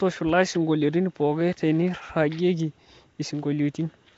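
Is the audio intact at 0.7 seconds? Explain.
No. Throughout the clip, likely Nellymoser compression, the audio sounds rough, hissy and underwater. Its spectrogram is cut off flat at 7.8 kHz, with noisy smeared bands.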